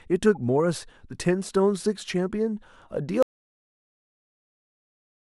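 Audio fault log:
0.35–0.37 s, corrupt frame decoded: a quick squeaky blip as a couple of damaged frames get played anyway, with their energy landing at the wrong frequencies.
3.23 s to the end, audio dropout to silence: the speech cuts off mid-flow into dead silence with no room tone, likely because the input dropped and silence kept being written.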